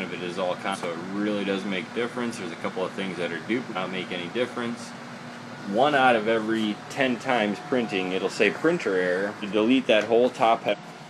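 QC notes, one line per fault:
0.70–0.77 s, 3.72–3.77 s, 4.93–4.97 s, 9.38–9.44 s and 10.68–10.75 s, damaged data in a compressed stream: five brief glitches, each about 40 to 70 ms long, where corrupted bytes made the decoder misread frames, lose sync and hunt for the next frame header. On a spectrogram each shows as a narrow vertical break or smear; the waveform has an abrupt discontinuity or garbled burst at each spot.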